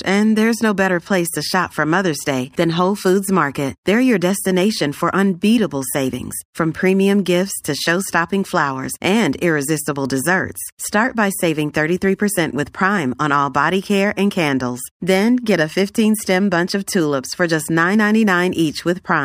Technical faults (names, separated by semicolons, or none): imaging from linear upsampling